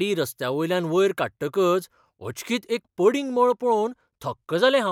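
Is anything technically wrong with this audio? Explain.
Yes. Channel delay (comb filtering) runs from 3.19 s to the end of the clip, starting just after "वयर काडटकच अचकीत एक". One channel lags the other by roughly a single sample, about 0.02 ms, and the two are summed to mono. With so tiny an offset, the first cancellation notch sits up around 20 kHz, so instead of an obvious hollow, phasey sweep, the speech loses top-end air and sounds duller in the highest frequencies.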